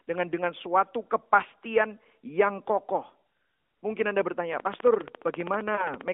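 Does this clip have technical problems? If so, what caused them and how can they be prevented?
Yes. A train of clicks runs from 4.53 to 6.09 s: about 20 sharp ticks of much the same shape, evenly spaced at roughly 15 per second and peaking about 15 dB above the speech. Because they also sound in the pauses, they are riding on top of the signal rather than coming from it. The likely cause is electrical interference from nearby equipment or a faulty connection or power supply injecting a repeating pulse. Moving or shielding the interfering gear, or fixing the connection or power supply, would prevent it.

A lost AMR speech frame shows up around 5.76 to 5.91 s, overlapping the clicks. This narrowband phone audio, limited to roughly 250 Hz to 3.5 kHz, lost one 20 ms frame to a radio error. The decoder filled the gap by repeating the previous frame's pitch and vocal-tract settings at reduced gain, which produces a brief dip and warble before the speech recovers slightly rough. 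Better radio coverage or stronger error protection on the link would prevent it.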